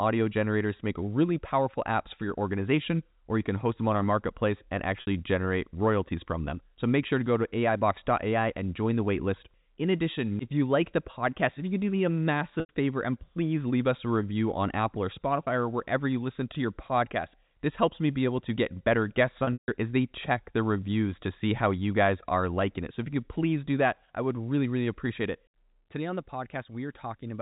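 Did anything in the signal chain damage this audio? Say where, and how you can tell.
Yes, the network stage damaged it, through packet loss with pitch repetition on the G.711 telephone path. Gaps fall at 5.01 to 5.07 s, 12.60 to 12.69 s, and 19.44 to 19.68 s. The first two, 60 and 90 ms, sound like a briefly held, buzzy tone. The third loses 180 ms across 240 ms, with a 150 ms run. That one fades toward silence before the speech cross-fades back. The losses come in 30 ms steps, which suggests 30 ms packets.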